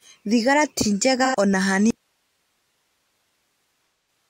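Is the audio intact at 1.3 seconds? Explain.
No. AAC frame loss with concealment affects 1.25 to 1.35 s. The decoder fills the gap from the last good spectrum, leaving a brief smeared, noisy patch.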